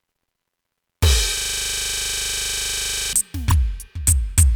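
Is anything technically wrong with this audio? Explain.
Yes, there are two problems in this music clip.

From 1.38 to 3.13 s there's a system hang loop. Something upstream froze, probably the computer or its audio driver, while the sound hardware kept replaying whatever was left in its ring buffer. Here that's a 40 ms slice of music repeated 44 times in a row. At a 25 Hz loop rate it comes across as a coarse, rattling buzz, with the music stuck in place until playback recovers.

Just after that, at 3.49 to 3.52 s, you get repeated frames. A 26.1 ms block plays twice back to back, which points to a single compressed frame being written or sent a second time. The decoder just plays it again, so there's a quick stutter, a tiny skip back in the music. The clip ends up 26.1 ms longer than it should be.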